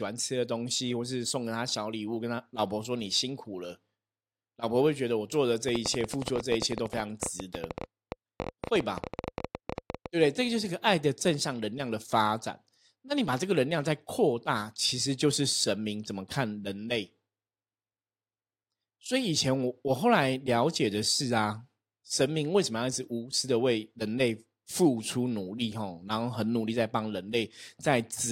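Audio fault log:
5.69–10.07 s, train of clicks: irregular pops at about 12.8 per second over the speech, roughly fifty, well above it, likely from nearby interference.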